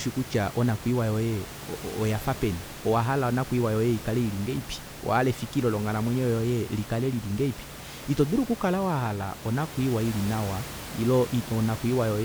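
No technical faults are audible.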